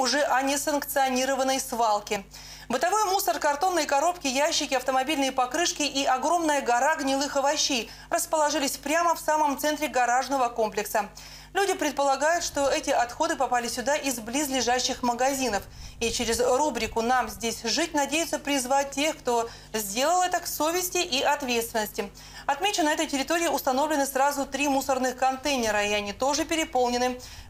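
Nothing stood out as a technical problem on listening to the audio.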